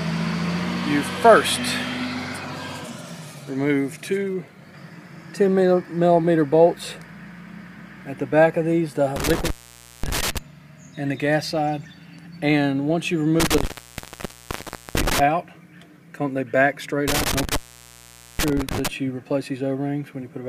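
Intermittent contact interrupts the sound three times: from 9.16 to 10.38 s the line opens for about 0.53 s, from 13.40 to 15.20 s for about 1.30 s, and from 17.08 to 18.88 s for about 0.83 s. Each time a loose connection breaks the signal path, so the audio drops out with crackle at the edges and only faint hiss remains. On the waveform, the signal collapses to a thin flat band between spiky edges. A spectrogram shows bright vertical streaks bracketing a nearly empty gap.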